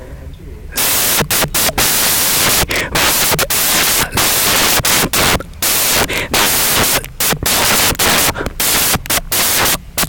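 Speech in this clip is buried under loud, harsh broadband noise for its whole length, the sign of samples built from the wrong bytes. The reader assembles each sample incorrectly, perhaps swapped or shifted by a byte, so the rapidly changing low-order bits land in the high-order position. On a waveform this looks like a dense block. A spectrogram shows broadband energy spread across the frequencies.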